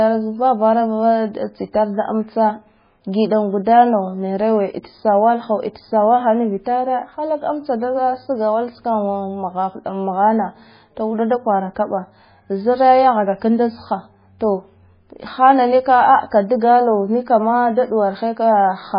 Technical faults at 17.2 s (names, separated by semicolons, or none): MP3 compression